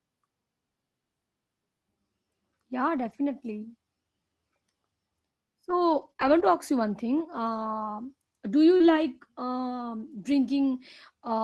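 Scattered short gaps appear between 2.97 and 9.82 s: about three brief dropouts in the speech, none longer than roughly 30 ms. Packets arrived late or never arrived, and the receiver concealed each hole by extending the preceding sound, smoothing about 420 ms of audio around roughly 80 ms of missing material. The speech stays clear, with only small ticks or momentary smears, over audio whose band-limited top end fits a 24 kbps Opus call path.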